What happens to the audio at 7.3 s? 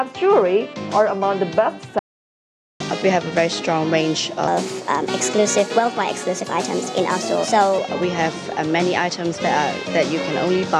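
At 7.3 s the audio is inside a section at the wrong speed, running from 4.48 to 7.78 s. It plays about 1.21 times too fast, likely because this stretch was resampled or clocked at the wrong rate, so pitch rises by roughly three semitones and everything sounds hurried and brighter. On a spectrogram the harmonics in that span sit visibly higher and events are compressed in time; the waveform's cycles look tighter than on either side.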